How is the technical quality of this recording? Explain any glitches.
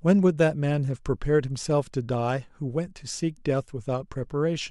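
Nothing here needs explaining: the recording runs along without any glitches at all.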